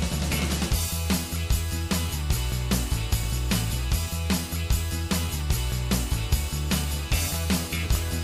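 No dropouts, clicks, distortion or timing errors turn up anywhere in the audio, so there is no fault to report.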